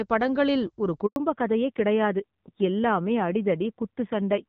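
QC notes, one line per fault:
1.06 to 1.16 s, handover gap: Right after "படங்களில் ஒரு" the speech drops out for 100 ms. It fades within a few tens of milliseconds, then goes silent. No speech frames arrived while the call switched networks, so that stretch is lost.
1.16 s to end, fallback to narrowband: From the handover onward nothing remains above 4 kHz. The speech turns duller and rougher than the clear HD Voice before it. The sound points to a drop from AMR-WB at 12.65 kbit/s to AMR-NB at 7.4 kbit/s.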